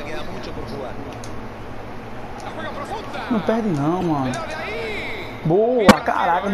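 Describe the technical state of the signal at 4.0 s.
A brief chirp, squeak, blip or burst of noise sounds from 4.01 to 4.03 s: a corrupt frame decoded, where flipped bits in a few compressed frames misplaced energy across frequencies.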